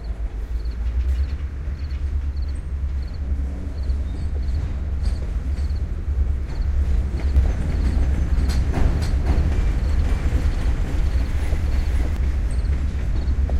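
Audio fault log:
7.36–12.16 s: doubled audio track; an equally loud, dry copy trails about half a second behind, likely from a slower second capture path.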